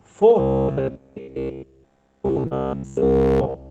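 Robotic sound from repeated short buffers runs from 0.4 s to the end of the clip. The speech collapses into a rigid, metallic buzz at 66.7 Hz that only loosely tracks the syllables. A 15 ms period fits a 15 ms stretch being replayed over and over, likely because fresh audio arrived too seldom and the playback filled the gaps with the last fragment. The repetition is essentially continuous, so the real audio in between is skipped.

Short concealed packet loss appears at 1.23 to 1.30 s and again at 2.47 to 2.54 s, inside the buzz. In each case 40 ms of audio never reached the decoder in time. The receiver covered 40 ms and 34 ms respectively by extending the preceding sound and then crossfading back into the real signal. Each gap is heard as a brief smear or wobble in the buzzing speech.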